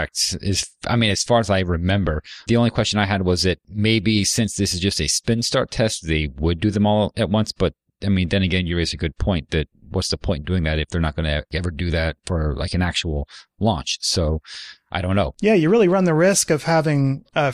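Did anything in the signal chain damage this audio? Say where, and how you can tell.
No, nothing in the signal chain audibly damaged this speech recording; every stage from capture through playback leaves the signal intact, with no audible defects to place in time.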